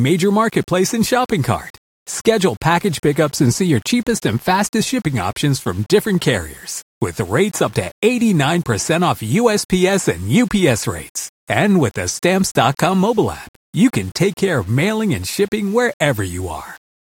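From start to finish the speech carries a grainy, gritty distortion that rises and falls with the voice, sitting roughly 30 dB below the signal. Quiet syllables and decays sound rough and sputter before dropping to silence. This is likely low bit depth without dither, consistent with rounding to about 7 bits, so the error tracks the signal. A zoomed waveform shows visible stair-steps, and a spectrogram shows broadband hash that appears only where there is sound.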